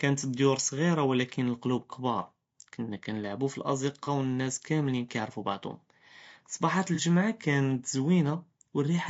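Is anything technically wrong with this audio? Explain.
Yes. The speech likely went through low-delay AAC compression, AAC-ELD, whose short frames resolve pitch harmonics poorly, and the damage fits a low bitrate around 32 kbps. Throughout the clip the voice sounds plainly rough and grainy, with noise filling between the harmonics and a thinned, synthetic top band.

There is also AAC frame loss with concealment, twice. From 4.04 to 4.08 s, between "אלקלוב כְּבּאר כנא כנלעבו" and "ואלנאס כאמלין יערפו בעְדהום", and again from 6.95 to 7.00 s, about 30 ms of audio went missing. The decoder rebuilt each gap from the preceding good spectrum, leaving a brief smeared, noisy patch in the speech.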